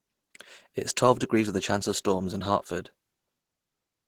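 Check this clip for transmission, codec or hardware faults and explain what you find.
One codec fault runs through the speech from start to finish: Opus compression, plainly audible. The sound is muffled and hoarse, with grainy, rough texture where there should be clean harmonics. This points to a low-rate Opus encode in hybrid mode, around 16 kbps, where the speech layer handles the lower band and the upper bands are kept only as rough energy, likely refilled with folded or noise-like content rather than real detail.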